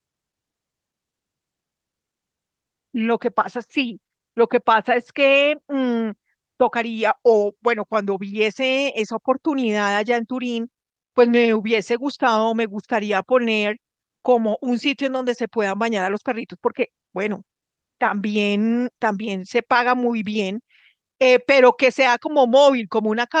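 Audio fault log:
Nothing to log here, as the speech comes through without a single technical fault to point at.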